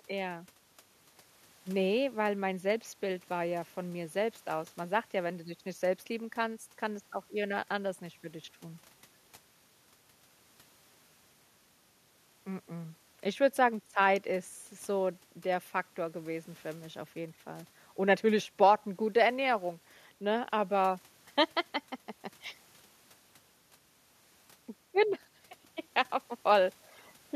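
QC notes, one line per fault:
No faults found in this clip.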